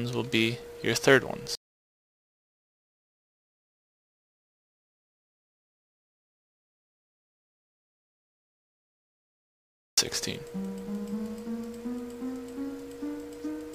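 At 1.55 s the sound stops abruptly and is replaced by silence until 9.98 s, when it resumes just as suddenly in mid-flow. This is an audio dropout to silence, roughly 8.4 s long. No room tone or noise floor survives in the gap, which points to the input having been lost, likely through a disconnected source, a failed link or an accidental mute, while the recorder kept writing silence. Whatever occurred during that stretch is unrecoverable.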